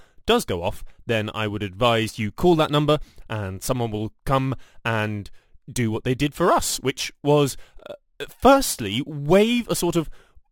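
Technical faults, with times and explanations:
Throughout, crude rate conversion: the speech carries a gritty, inharmonic fizz that rises with louder and brighter passages. The pattern fits a change from 44.1 kHz to 48 kHz done by simply repeating the nearest sample rather than filtering. Because the repeats fall on a fixed cycle set by the two rates, the timing error produces shifted, inharmonic copies of the speech, sitting roughly 25 dB below it.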